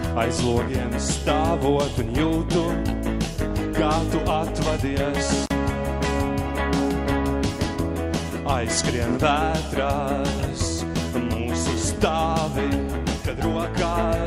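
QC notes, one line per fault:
5.44–5.50 s, intermittent contact: the signal drops out abruptly for about 46 ms, with crackle on either side of the gap, and faint hiss remains while the line is open. This points to a loose plug or cable whose conductor briefly loses and then regains contact. The crackle comes from the connection making and breaking unevenly at each edge, rather than switching cleanly.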